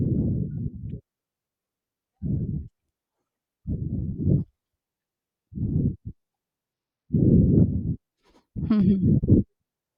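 A speech recording with a Bluetooth SBC bit pool drop from 6.73 to 7.54 s, lasting about 0.8 s. Across that stretch the treble goes dull and a gritty, granular noise rides on the voice, then clears when the rate recovers. With a starved bit budget the encoder leaves the upper sub-bands empty and quantises the remaining ones coarsely. The degree of loss points to the bit pool falling from around 28 to 12, roughly 96 kbps.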